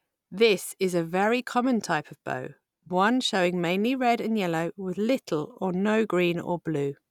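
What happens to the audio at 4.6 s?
Nothing goes wrong at 4.6 s; the speech continues intact through that moment with no dropout, click or distortion.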